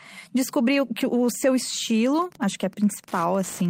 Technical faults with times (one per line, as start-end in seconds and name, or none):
2.13-3.69 Wi-Fi interference